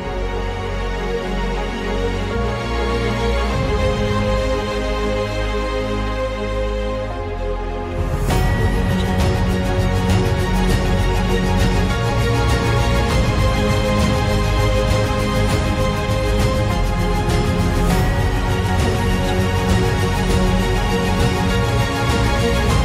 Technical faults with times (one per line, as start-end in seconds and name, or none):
none